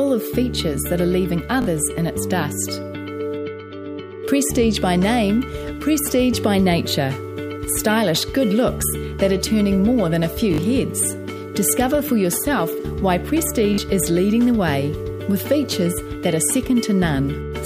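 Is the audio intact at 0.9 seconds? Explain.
Yes, the audio is intact at 0.9 seconds, with no dropout, click, distortion or other fault present at that moment.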